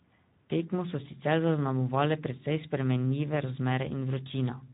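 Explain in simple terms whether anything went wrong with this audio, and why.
Speex codec damage runs through the whole clip, from the first moment to the last. Speex is an older speech codec built for internet calls and game chat. It rebuilds each stretch of speech from a rough model plus a small budget of detail, and here that budget is tight, so the speech comes out plainly noisy and hoarse. Everything above about 3.8 kHz is gone, which makes the speech sound dull and boxed-in.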